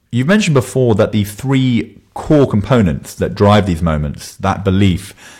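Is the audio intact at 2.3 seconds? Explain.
No. Hard clipping runs from 2.31 to 2.81 s: the speech is driven about 5 dB past what a stage can pass, so its peaks are sliced flat, adding harsh upper harmonics as crackle on loud syllables. Unlike soft saturation, the edge is abrupt and gritty, not warm.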